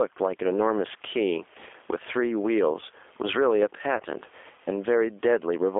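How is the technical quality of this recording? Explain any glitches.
Quality is compromised by three things you can hear: gain pumping, plainly audible G.729 coding, and one short dropout from packet loss.

Gain pumping runs through the whole clip. The gain ducks by something like 15 dB when the talker comes back in. That's likely input gain set far too high with a fast limiter clamping down, which squashes loud and soft parts together. The room noise sits about 42 dB below the speech.

The G.729 codec is also audible throughout. The speech is boxed into roughly 300 Hz to 3.5 kHz and has that rough, slightly synthetic texture, which fits 8 kbit/s G.729A. The coder rebuilds speech from a vocal tract filter and pitch predictor plus a few pulses per frame rather than sending the waveform.

VoIP packet loss concealed by the speech codec shows up from 3.98 to 4.02 s. It sounds like a single lost 20 ms packet. 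The decoder stretches the last pitch and filter into a brief sound that fades, and the voice stays weak as it recovers.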